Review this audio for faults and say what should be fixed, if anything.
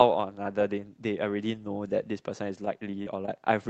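From 2.65 to 3.30 s the speech turns choppy, with four short holes, the longest about 28 ms. This is repeated packet loss: the receiver bridges each missing piece by stretching the last sound, so roughly a tenth of that stretch is filled-in rather than real. The speech reaches only about 8 kHz, consistent with an Opus call path. To prevent this, stabilise the network path or enable forward error correction so the lost packets can be recovered.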